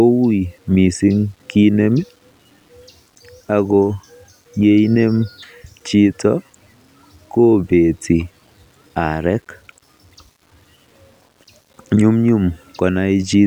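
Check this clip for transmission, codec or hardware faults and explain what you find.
One fault runs through the whole speech clip. Throughout, quiet passages turn gritty with grainy distortion that follows the voice, likely from low bit depth without dither, with rounding that fits about 9 bits. The error sits roughly 45 dB below the signal and disappears in pauses, unlike steady dither hiss.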